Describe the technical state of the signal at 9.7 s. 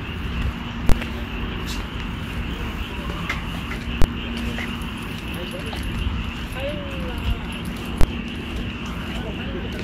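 At 9.7 s the sound is intact, with no dropout, distortion or other fault audible at that moment.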